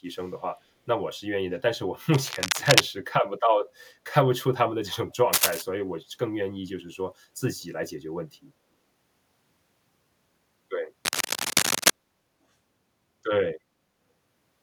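Cable scratch noise hits at 2.14 to 2.81 s, 5.33 to 5.62 s and 11.05 to 11.90 s, with rough rustling bursts about as loud as the speech, likely from a worn, jostled connector.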